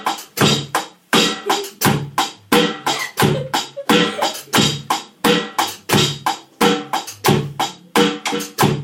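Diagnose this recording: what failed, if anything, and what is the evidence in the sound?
Nothing here has gone wrong: there's no dropout, glitch or damage anywhere in the sound to point to, so there's no failure to diagnose.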